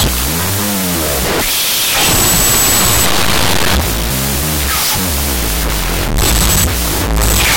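From start to finish the speech sits under loud, harsh noise, playing at half speed an octave low. This is a wrong sample width fault: 16-bit integer data read as unsigned 8-bit, so each sample's two bytes become separate values, doubling the length.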